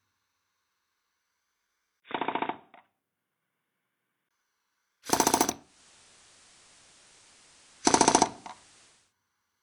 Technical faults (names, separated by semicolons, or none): input switched to a poorer device; digital radio blending to analogue